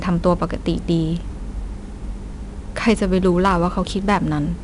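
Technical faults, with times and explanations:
Throughout: 4-bit ADPCM compression. Each sample is coded as a coarse 4-bit step from a prediction, so there's a plainly audible gritty hiss tracking the louder speech. Nothing reaches above 10.6 kHz, which fits roughly 88 kbps at a 22 kHz sample rate.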